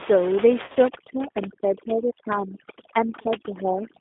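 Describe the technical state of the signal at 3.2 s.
The speech is carried through the G.729 codec at 8 kbit/s. Its band runs from about 250 Hz to 3.6 kHz. Rebuilding from a pitch predictor and a few pulses makes it rough and synthetic.

Overdone noise removal is active from 0.88 s onward. It pushes the room noise, about 10 dB below the speech, down and breaks it into twinkling specks.

At 3.22 to 3.28 s, just after this moment, VoIP packet loss is concealed by the speech codec. About 30 ms are missing, which fits three lost 10 ms frames. The decoder stretches its last pitch and filter into a buzzy tone or coloured noise that fades. The voice stays weak for tens of milliseconds or more afterward.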